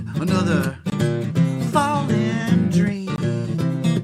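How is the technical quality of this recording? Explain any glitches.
Two brief glitches break the recording. Each is a block of digital silence, at 0.90 to 0.92 s and 3.16 to 3.18 s. Output samples drop abruptly to silence for 20 ms, giving a short hole.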